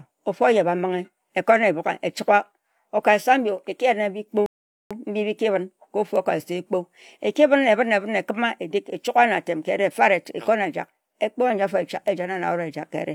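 At about 4.46 s the speech just drops into silence and picks up again at 4.91 s, which is a classic rebuffering stall. The player ran dry of downloaded audio, so it sat and waited roughly 0.44 s for more data before carrying on. Because playback resumes right where it paused, nothing gets skipped; you just get an unnatural gap that stretches the timing by that extra 444 ms.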